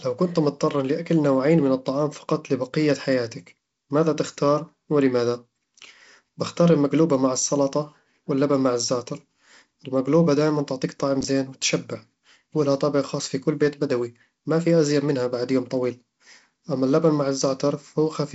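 At 11.21 to 11.24 s the speech jumbles briefly. This is chunks out of order: one 10 ms chunk came in two chunks late and plays after the pair that should follow it, so a 30 ms span is reshuffled. Unlike a dropout or packet loss, no audio is missing or replaced with silence. The material is all present but rearranged, leaving three hard joins, heard against the G.722 band limit near 7.7 kHz.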